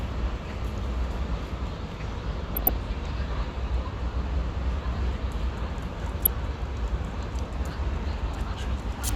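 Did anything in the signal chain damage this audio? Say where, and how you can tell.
Yes. DAB burbling at the codec stage, from 2.52 to 2.76 s and 6.24 to 6.40 s. Bit errors of a fraction of a percent got past error correction and corrupted MP2 sub-band samples and scale factors. On a spectrogram, isolated bands jump frame by frame. It sounds like short blips of noise.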